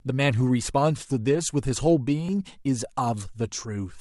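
A speech clip with one Bluetooth stutter, from 2.26 to 2.29 s. Here a slice of audio about 23 ms long repeats. The receiver's data arrived late or not at all, so it replayed the last buffer it held. The result is a brief hiccup. The speech then picks up further along, as though it had kept playing underneath. The gap's size fits a single lost packet.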